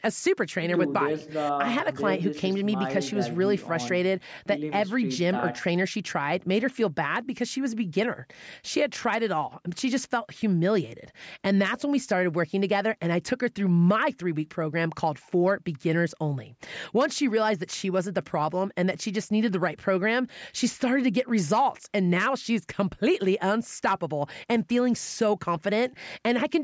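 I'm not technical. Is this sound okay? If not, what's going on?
Yes, the recording is technically sound: it has only been through a call's normal microphone processing, which trims the very deepest bass and leaves nothing above 8 kHz, as is typical for a phone or video call.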